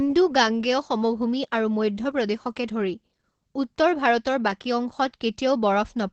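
Opus voice compression affects the speech for its whole length. The codec here runs in its SILK linear-prediction mode, modelling the voice as a filter driven by an excitation signal. The sound is band-limited to about 8 kHz, consistent with wideband coding, and the excitation is coded coarsely, which fits a bitrate near 12 kbps. The damage is plainly audible: the voice sounds muffled, with a hoarse, slightly robotic edge.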